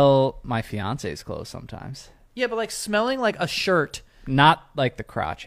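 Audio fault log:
3.53 to 3.58 s, damaged data in a compressed stream: right after "like smelling like a" there's a 50 ms glitch where some of the encoded bytes got mangled, so the decoder misread those frames and lost sync until it caught the next good frame header.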